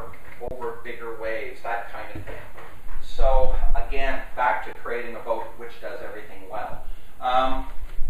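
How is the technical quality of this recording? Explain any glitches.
The recording has two brief dropouts. Both are an underrun with held sample. At 0.48–0.51 s (30 ms) and 4.73–4.75 s (20 ms), the output buffer ran dry and the converter held its last value, so the sound freezes. On a waveform this appears as a flat line, and on a spectrogram as a blank vertical strip. During each gap, about as much live audio as the gap's length was skipped.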